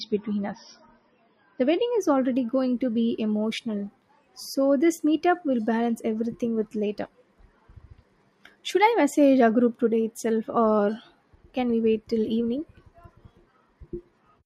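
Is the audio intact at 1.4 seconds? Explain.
No. At 1.4 seconds the speech sounds dull and smeared, with nothing above about 5.9 kHz and stronger codec artefacts, and it stays that way from the start until 2.0 s. Then the quality jumps up with no gap, just before "already going to be". This is an adaptive stream starting at a low bitrate. The player began on a cheap rendition, which fits roughly 24 kbit/s MP3, and switched to a far richer one, consistent with 128 kbit/s, once it had measured the connection.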